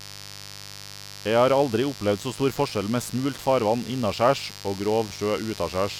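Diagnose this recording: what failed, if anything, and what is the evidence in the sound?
Analogue wiring let switching spikes from a 50 Hz supply into the signal, producing mains buzz: a steady, raspy tone throughout, roughly 15 dB below the speech.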